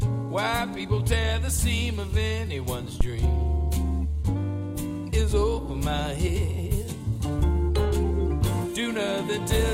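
At 3.01 s a phantom power thump breaks in and is gone by 3.09 s: a deep, short bump peaking at about -10 dBFS, its tail dying away within roughly 19 ms. It comes from a supply being switched on a live input, the voltage step pushing through the coupling capacitors as one low-frequency pulse. On a waveform it shows as a sudden one-sided swing easing back to centre; a spectrogram shows a brief dark smear at the bottom of the frequency range.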